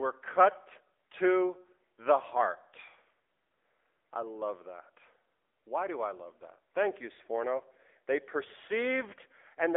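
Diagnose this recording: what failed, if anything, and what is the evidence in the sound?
At the codec stage, the speech went through an AMR narrowband mobile codec for its whole length. Nothing passes above 3.7 kHz, and the line band runs from 300 Hz to 3.6 kHz. The few coded pulses per subframe leave a buzzy, synthetic quality that fits a low mode near 8 kbps.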